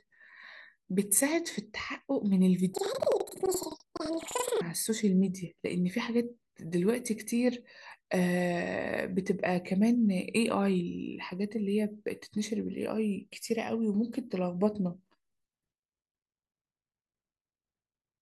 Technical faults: planar audio read as interleaved

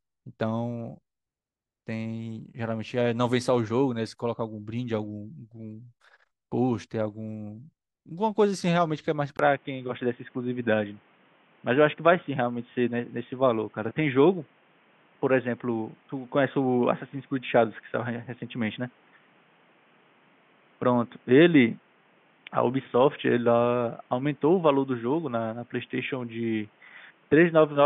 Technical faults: input switched to a poorer device

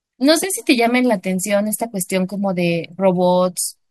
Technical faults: none

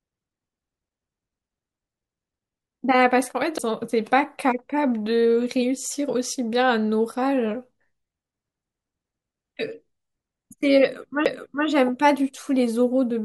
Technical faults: CD skip

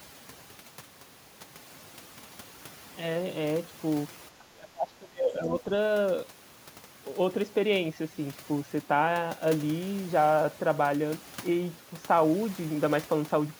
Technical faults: overdone noise removal; speech suppressed in double talk

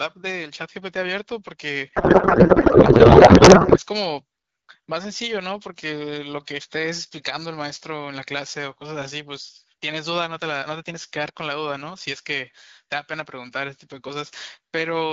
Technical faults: codec payload misread

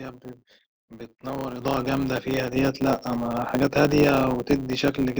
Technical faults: block size mismatch (truncated); microphone volume stepped up

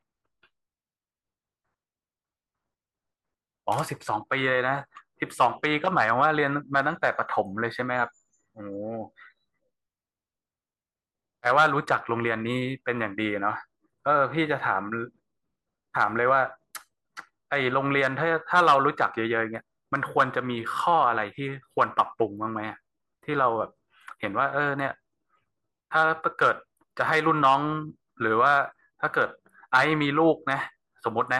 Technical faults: none

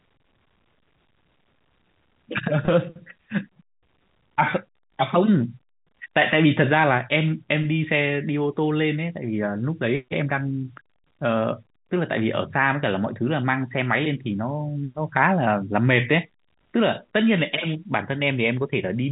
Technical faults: none

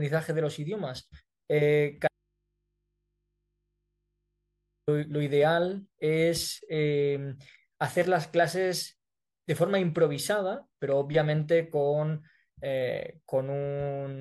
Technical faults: audio dropout to a faint residue

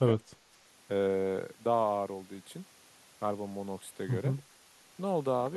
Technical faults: speech suppressed in double talk

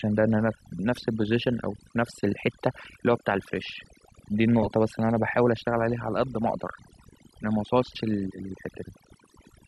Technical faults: overdone noise removal

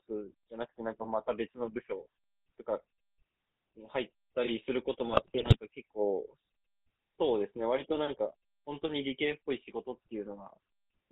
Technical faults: GSM full-rate codec; GSM bit errors

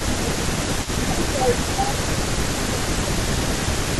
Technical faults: echo leak; speech suppressed in double talk

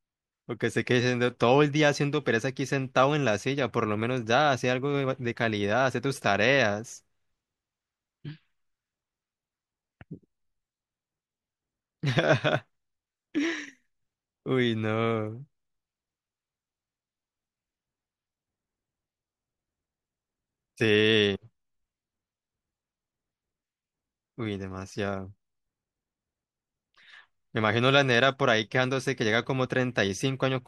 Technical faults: none

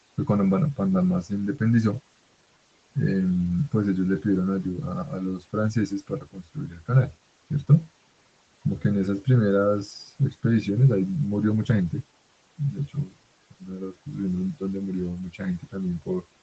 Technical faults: speech cut by the noise suppressor

